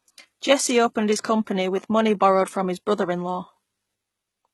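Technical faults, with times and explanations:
Throughout, HE-AAC compression: the speech was likely passed through HE-AAC at a rate that fits about 16 kbps, so only the lower spectrum is coded and the treble is rebuilt from copied lower bands. Heavy damage leaves s sounds gritty, metallic and lispy, with mismatched harmonics up top.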